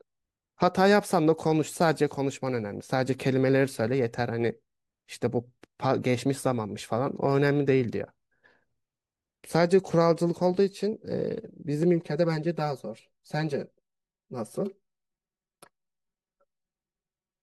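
From about 11.83 s right through to the end, the speech goes hollow and phasey. That's channel delay, which causes comb filtering. One side is running roughly 5 ms behind the other, so when the two are summed to mono, whatever they share cancels at regularly spaced frequencies. The first notch sits somewhere around 100 Hz, with more repeating up the spectrum. That's why the sound turns thin and slightly tubey instead of full.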